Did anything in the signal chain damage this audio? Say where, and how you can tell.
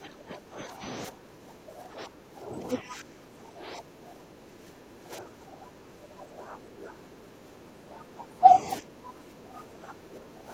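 Yes: speech suppressed in double talk, from call processing, throughout 0 to 10.5 s; level dips by about 15 dB in patches, likely echo-canceller gating, showing as notched waveform envelope.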